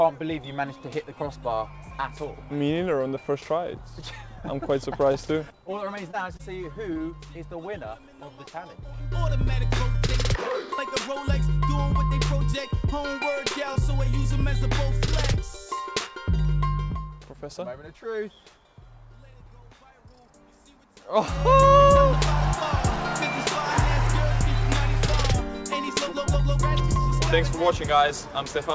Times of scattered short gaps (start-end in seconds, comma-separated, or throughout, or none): 5.12-6.97